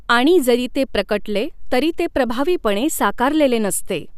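Speech recording; no technical faults can be heard.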